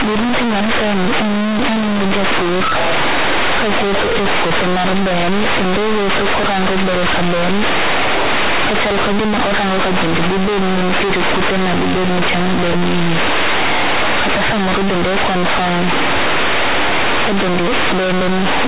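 From start to finish, the mu-law bytes of a G.711 stream are being played as plain linear 8-bit samples, so the companded audio read as linear never passes through expansion. Every change of sign throws the output across roughly half its range, which pushes quiet passages up to the level of loud ones and bends the waveform badly. The speech comes out very loud and harshly buzzing, with heavy noise filling the pauses, all still confined below 4 kHz by the telephone coding.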